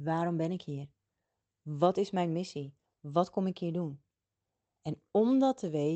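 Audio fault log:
No faults are present in the speech, which reaches the listener over a call path whose coding character and top end near 8 kHz fit Opus running at about 24 kbps.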